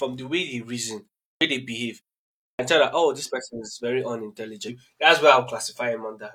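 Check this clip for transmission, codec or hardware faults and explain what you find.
Two clipped starts after a pause are present in this speech, at 1.34 s and 2.52 s. Each follows a gap in the sound, of 0.33 s and 0.59 s respectively, and in each case roughly 71 ms of the onset is missing. During silence the output device drops into a low-power state or loses lock and needs time to resume. The first fraction of speech after each pause is swallowed, so the talker seems to begin abruptly, mid-sound.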